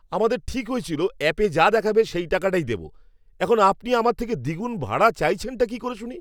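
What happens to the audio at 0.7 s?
Nothing goes wrong at 0.7 s; the audio there is intact, with no dropout, click, distortion or other fault at that moment.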